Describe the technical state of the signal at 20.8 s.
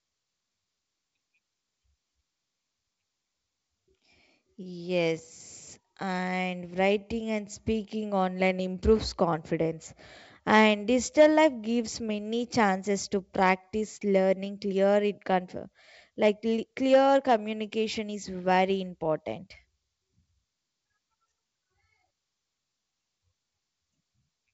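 At 20.8 s the signal is intact, carried through G.722 wideband telephone coding at 64 kbit/s with no fault present at that moment.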